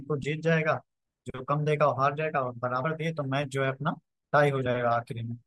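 At 2.84 s the speech jumps forward, losing about 40 ms of audio. This is compressed frames skipped: whole frames of the encoded stream never reach the output, so playback lands later than it should. At 4.65 s it happens again, with roughly 20 ms gone.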